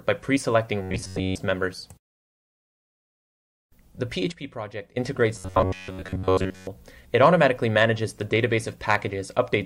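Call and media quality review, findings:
Robotic sound from repeated short buffers, 0.82–1.38 s and 5.36–6.67 s: rigid metallic buzz near 93.8 Hz, likely a starved playout buffer looping roughly 10.7 ms chunks while most of the real audio is skipped. The fixed repeat period imposes the buzz.

Sudden gain jump, 4.32–4.97 s: level and background noise both drop abruptly by about 12 dB, then return, with no ramp. Likely an unsmoothed digital gain or bit-shift change applied between adjacent samples.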